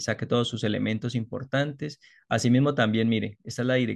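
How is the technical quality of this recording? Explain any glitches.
The technical quality of this recording is sound, with no glitches to explain.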